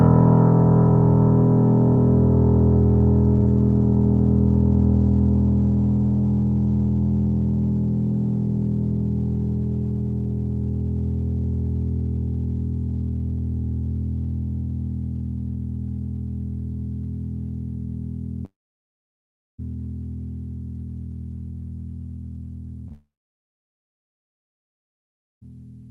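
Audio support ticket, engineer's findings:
Music over a call path; Opus-style band-limiting, with top end gone above about 12 kHz. Long network dropouts at 18.45–19.60 s and 22.92–25.43 s: last sound smears into a fading buzz or hiss, then near-silence, and the music resumes past the gap. Likely a jitter buffer starved by a network outage.

Short concealed packet loss at 22.88–22.92 s: a quick smear or wobble where about 20 ms went missing and the decoder papered over it by extending the prior sound, just ahead of the second dropout.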